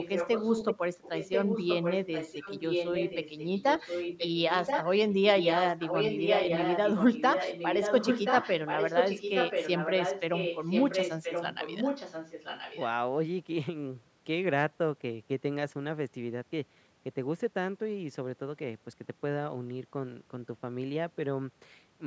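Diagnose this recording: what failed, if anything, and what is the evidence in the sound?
A second, delayed copy of the speech trails the talker by about 1.03 s, running from 0.00 to 0.74 s and again from 1.02 to 12.85 s, only a few decibels quieter than the direct voice. This is an echo leak in the call processing stage: the far end's loudspeaker output likely reached its microphone and slipped past the echo canceller, returning the voice one round trip late.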